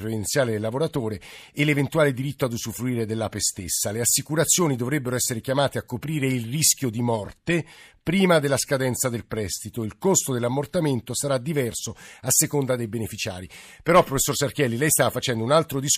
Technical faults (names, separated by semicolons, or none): none